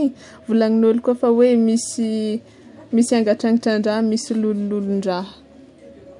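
No technical faults are audible.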